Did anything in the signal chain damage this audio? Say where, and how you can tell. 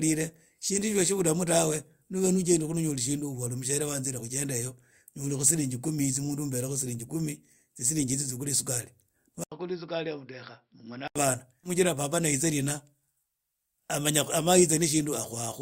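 Yes. From 9.44 to 11.16 s the speech turns dull and boxy, which points to the input being switched to a poorer device, most likely a driver-level change to another microphone or a headset's call profile. Nothing above 5.5 kHz gets through, the level falls by roughly 10 dB, and a new noise floor sits roughly 50 dB under the signal. An 80 ms silence marks the moment the input changed over.

At 11.63 to 11.69 s the sound jumps abruptly ahead with a small discontinuity, the signature of a stream segment skipped at the network and playback stage. The likely cause is a segment of the stream that failed to load, so the player went straight on to the next one. Everything in that segment is lost rather than delayed. That is why the sound leaps forward at the seam instead of stalling or repeating.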